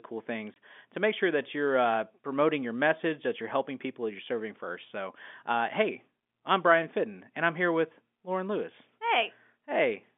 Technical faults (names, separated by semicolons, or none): packet loss filled with silence